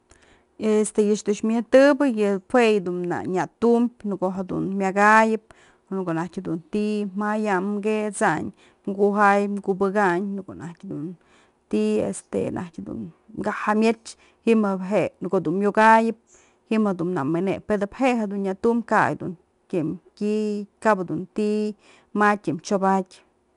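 Throughout, 4-bit ADPCM compression coarsely quantises each sample, adding gritty hiss that follows loud speech; spectrograms show level-tracking noise haze and nothing above 10.6 kHz.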